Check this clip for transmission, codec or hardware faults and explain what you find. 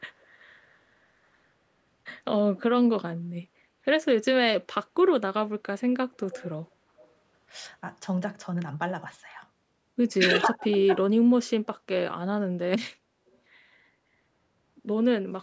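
Two call-path faults are present in the speech: recurring echo leak and one passage of speech suppressed in double talk.

Echo leak appears at 0.2–0.27 s, 6.31–6.49 s, 6.98–7.1 s and 13.29–13.37 s. Each is a brief delayed copy of the speech arriving roughly 284–293 ms late. Most are faint, but the one at 6.31 s is fairly prominent. The likely cause is a far-end loudspeaker echo that the canceller failed to fully subtract.

Speech suppressed in double talk occurs at 10.46–11.27 s. For about 0.7 s the talker's level is pulled down in pieces, by as much as around 35 dB at the deepest point. This likely happened because the echo canceller could not separate near-end speech from echo while both sides were talking. The audio carries nothing above 8 kHz.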